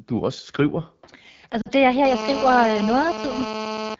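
Speech coded with the AMR wideband (HD Voice) codec has a rough, raspy texture throughout, which fits one of the lowest modes, around 8.85 kbit/s. From 1.61 to 1.70 s, just before "er her", lost AMR speech frames cause the decoder to repeat its last parameters at falling gain, producing a brief smeared dip that fits about two missing 20 ms frames. From 2.05 to 3.95 s, after "er her", a steady GSM phone buzz at about 217 Hz with many harmonics sits about 8 dB below the speech; this is radio bursts from a nearby 2G handset on a call being rectified in the audio circuit.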